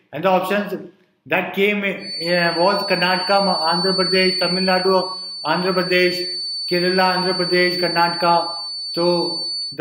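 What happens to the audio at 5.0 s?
At 5.0 s a loudspeaker-to-microphone loop is likely sitting right on the edge of feedback, holding one frequency near 4.5 kHz. That produces a feedback whistle, thin and steady, a little below the main sound, swelling and fading slowly in level, from 1.96 s to the end.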